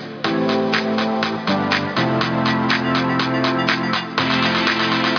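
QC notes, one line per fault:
Nothing stood out on listening.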